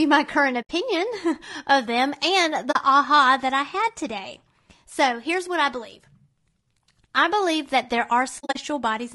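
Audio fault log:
throughout: low-delay AAC compression. The speech sounds rough and grainy. A noisy haze sits between the harmonics, and the top band sounds thin and synthetic. The likely cause is AAC-ELD, the low-delay AAC used for video calls, at a rate that fits about 32 kbps. Its short frames cannot separate pitch harmonics finely, and each frame costs extra bits. Detail is lost, and noise fills the spaces it leaves.
0.62–0.71 s, 2.71–2.76 s, 8.39–8.57 s: AAC frame loss with muting. The sound drops out after "my current" for 80 ms. It drops out again between "of them and" and "aha that I had" for 40 ms. After "I believe that there", several short gaps are scattered over 160 ms, the longest around 40 ms. Whole frames were lost and decoded as silence. The overlapping windows fade the sound out and back in, so each hole has soft edges.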